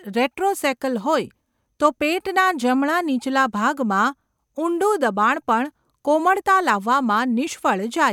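No technical faults are audible anywhere in this speech recording.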